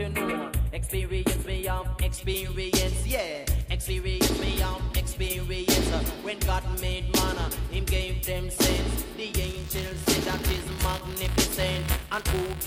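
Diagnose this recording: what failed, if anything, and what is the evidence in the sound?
Channel delay (comb filtering), 0 to 2.12 s, at the stereo-to-mono sum. One channel runs a few samples late, around a tenth of a millisecond, so their common content cancels at evenly spaced frequencies from roughly 5 kHz upward. The sound is hollow and dull on top.

Buffer tearing, 9.41 s to the end, at the driver or buffer stage. A steady robotic buzz at 200 Hz, present only with signal, means 5 ms periods. Writer and reader cross inside each period, splicing in a small sliver of audio about 20 ms old with hard joins.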